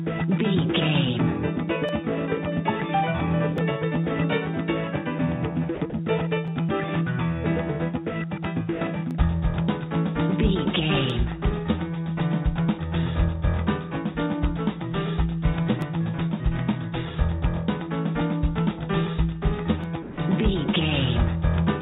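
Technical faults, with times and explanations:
1.89, 3.58, 6.48, 9.11, 11.10, 15.82 and 19.84 s: dropped samples. Each time the stream likely lost a tiny run of samples, under a millisecond's worth, so the waveform leaps straight from one value to a later one with nothing in between. Far too short to remove any audible sound, each gap is heard as a single sharp click, a thin vertical line across the spectrum that already stops at 4 kHz on this narrowband call path.
5.75 to 5.81 s, 5.90 to 5.93 s and 20.03 to 20.18 s: sound dropped by the voice detector. The sender's voice activity detector likely judged the sound at these moments to be background and stopped transmitting, so the receiver filled in comfort noise. The first two gaps, about 60 ms and 30 ms, fall close together and make the sound flicker out and back. The last, about 150 ms, is a longer stretch where the sound gives way to flat, steady noise before resuming.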